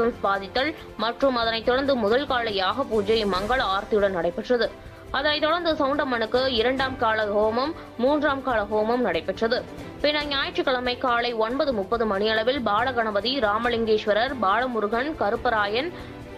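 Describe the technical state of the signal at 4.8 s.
At 4.8 s the signal is intact, with no audible fault at that moment.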